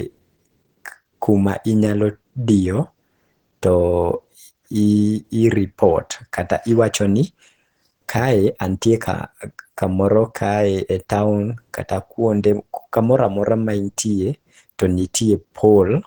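Right through the speech there's a low-bitrate audio saved at a high bitrate problem. The file is a high-rate MP3 with content reaching up to a cut-off around 20.1 kHz, yet the detail inside it sounds like it was thinned out earlier. That points to a very lean encode, likely something like 16 kbit/s Opus, that was then re-saved at around 320 kbit/s. The bigger file just preserves those losses.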